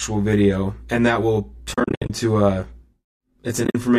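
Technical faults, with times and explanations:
Throughout: channel delay (comb filtering). One channel lags the other by around 20 ms, and summing them to mono cancels shared content at evenly spaced frequencies starting near 30 Hz. That packs narrow notches densely up the spectrum, leaving the speech rough or slightly doubled in a constant, unmoving way. A codec problem would come and go with the signal, but these notches stay fixed. The codec, likely a low-delay AAC stream at 64 kbps, adds only light roughness on top.
1.74 to 2.10 s: AAC frame loss with muting. Over about 360 ms, roughly 250 ms of audio drops out in scattered gaps, the longest around 70 ms. The pattern fits a cluster of lost 10 ms frames whose spectra the decoder zeroed. Overlapping windows fade each gap out and back in, so the sound breaks into soft, stuttering holes, unlike hard dropouts that snap.
3.65 to 3.75 s: AAC frame loss with muting. 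A shorter burst of the same kind blanks about 80 ms within a 100 ms span, the longest gap near 50 ms. Each hole is smoothly faded at both edges by the decoder's window overlap instead of being cut abruptly, so it reads as a brief soft flutter of silence rather than a sharp gate.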